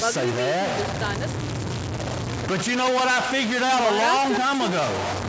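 From start to finish the speech carries a distortion that rides on every sound, and the pauses never go quiet but fill with a gritty noise floor. That pattern points to a stuck bit, likely one data line held at 0 or 1 in the converter or wiring, so roughly half the sample values land off by that bit's weight and quiet passages flip around it. The call's microphone processing is audible too, with nothing above 8 kHz.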